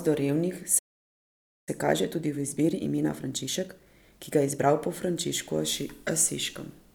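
Right after "do revnih" at 0.78 s, the speech cuts to silence for about 0.88 s, resuming at 1.69 s. This playback stall most likely came from the player running out of buffered data or its output thread being blocked, so nothing reached the output until it recovered.

From 1.69 s to 4.69 s the speech sounds hurried yet keeps its normal pitch. This is time-compressed catch-up: the player trims its backlog by cutting out small slices and cross-fading the joins, running at 1.25 times normal speed.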